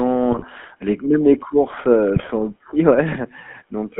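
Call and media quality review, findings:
GSM full-rate codec, throughout: buzzy, gravelly speech, narrow band of roughly 200 Hz to 3.4 kHz, nothing above. Consistent with 13 kbps GSM full-rate: vocal-tract model driven by sparse regular pulse excitation, coarse enough to leave audible roughness.

GSM bit errors, 0.32 to 0.45 s, just before "les c même les": squawk and gargle. Corrupted filter, pitch or gain parameters reaching the decoder, bending the spectrum frame by frame.

GSM bit errors, 2.16 to 2.31 s, just after "même les courses heu": similar popping and gargling across several consecutive frames. Same mechanism: flipped bits on a weak link distorting decoded parameters.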